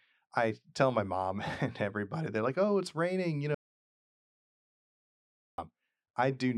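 At 3.55 s, right after "oh it's raining you", the speech cuts off into dead silence with no room tone, returning at 5.58 s. This audio dropout to silence erased about 2.04 s, most likely from the input being lost while the recorder kept writing silence.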